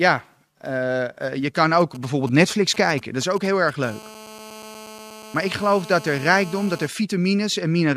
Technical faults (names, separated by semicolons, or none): GSM signalling bursts; GSM phone buzz